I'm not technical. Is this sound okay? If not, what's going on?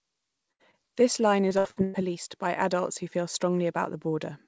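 No. From 0.52 to 0.61 s, the last sound is held and fades, then the speech jumps ahead. That is a burst of packet loss: about 80 ms never arrived and was patched over.

At 0.71 to 0.75 s there is a tiny smear. This is a short concealed packet loss, where a few hundredths of a second went missing and were filled in.

From 1.49 to 1.96 s, just before "by adults who feel", the voice sounds choppy. This is repeated packet loss: four gaps in a row, so about half of that stretch is filled-in guesswork.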